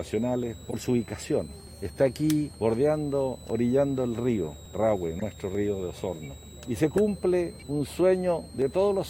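Throughout the clip, a switching supply whistle sits under the sound: a thin high tone around 4 kHz that wanders between roughly 3.6 and 4.3 kHz. It comes from a switching power supply running in an audible burst mode, or two supplies beating against each other, and letting that ripple leak into the audio path. It stays well below the wanted signal, somewhere near 25 dB down.

From 0.43 s to 8.62 s there are periodic USB or driver dropouts, spaced every 1.02 s, about ten in all. At each one something in the background briefly stalls the USB transfer or the audio driver, and a sliver of audio, around half a millisecond, is simply skipped rather than padded with silence. The splice leaves a small discontinuity in the waveform, heard as a regular tick that sits on top of the signal at a steady clock-like rate.

A corrupt frame decoded shows up first at 0.70 to 0.74 s, a single damaged frame. 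Flipped bits in the compressed data led the decoder to apply wrong gains or misread coefficients, so energy lands at frequencies it doesn't belong. The result is a brief chirp or squeak that is unrelated to the surrounding sound, lasting about one frame and stopping abruptly.

The same fault returns at 5.19 to 5.24 s, this time spread over a couple of frames and somewhat quieter, giving a slightly longer blip of misplaced, noisy energy. A third corrupt frame decoded is heard at 6.97 s as a very short, click-like burst. In each case the decoder recovers on the next clean frame, which is why the artefacts end sharply.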